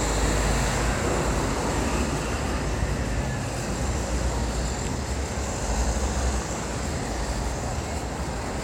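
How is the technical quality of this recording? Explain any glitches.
No glitches are audible anywhere in the recording, and there is nothing to explain.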